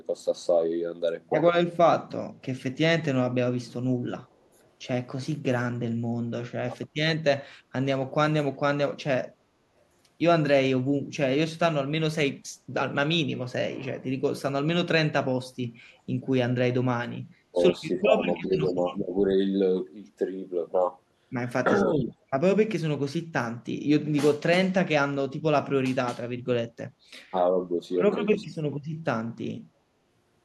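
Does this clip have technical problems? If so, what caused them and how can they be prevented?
Yes. There are faint repeats of the speech at 2.73 to 2.77 s, 4.24 to 4.69 s and 18.43 to 18.47 s, each trailing the original by about 0.36 s. They sit roughly 40 dB below the speech, and the last one is a little stronger at around 30 dB down. This is echo leak, likely from a far end on a loudspeaker whose echo canceller let part of its microphone pickup return down the line. Using a headset there, or a better-tuned echo canceller, would prevent it.

The speech also dips briefly in level at 6.69 to 6.73 s, 17.51 to 17.58 s, 17.96 to 19.09 s, 21.96 to 22.17 s and 28.42 to 28.67 s. The drops at 6.69 s and 17.96 s are shallow, around 5 dB. The others are deeper, around 15 to 20 dB. This is speech suppressed in double talk, likely caused by an echo canceller that could not separate local speech from echo while both sides spoke and so attenuated both. 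A canceller with stronger double-talk detection, or headsets that remove the echo path, would prevent it.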